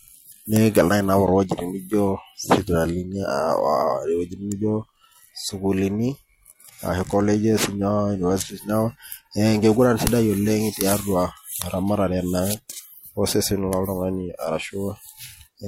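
An electrical switching spike lands at 4.52 s in the speech: a sharp snap, peaking somewhere around -15 dBFS, laid over the sound. It is most likely a nearby switch or discharge arcing briefly, with the burst picked up by the audio line.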